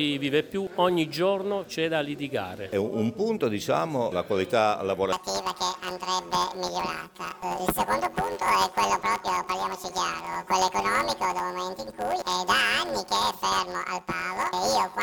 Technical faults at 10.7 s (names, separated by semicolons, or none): planar audio read as interleaved